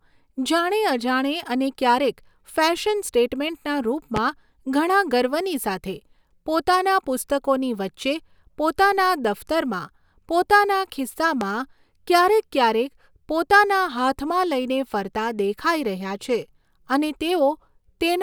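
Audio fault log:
4.16–4.20 s and 11.41–11.45 s, loud pop: a single sharp pop peaking roughly 15 dB above the speech, likely from a voltage pulse added to the signal while speech continues underneath.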